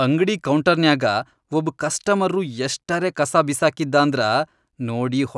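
Speech recording with no audible technical faults.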